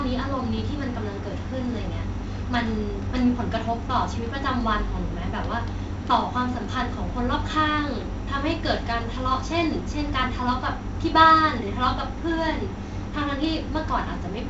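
The speech carries no technical faults, with a band that ends near 7.8 kHz as G.722 wideband telephone coding leaves it and the light graininess that points to the codec's 48 kbit/s mode.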